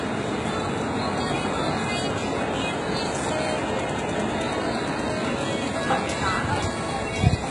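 HE-AAC compression throughout the everyday-sound recording: treble is likely rebuilt from copied lower bands, sounding gritty and metallic, with nothing above 11.1 kHz, fitting roughly 12 kbps.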